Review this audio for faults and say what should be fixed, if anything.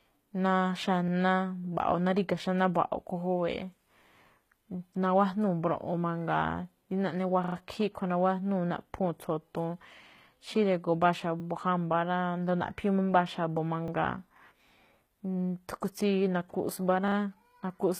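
The speech has gritty, lispy treble with nothing above 14.9 kHz. Likely HE-AAC compression at a low bitrate, around 20 kbps, rebuilding the top end from copied lower bands. Encode at a higher bitrate, or use plain AAC.

There's a repeated buffer at 1.08, 7.44, 11.4, 13.88 and 17.08 s. Each is a short stutter where one chunk, which fits a 40 ms buffer, plays again: three extra times at 7.44 s, twice at 17.08 s, and once at the others. Give playback a larger buffer so new audio arrives before the device runs dry.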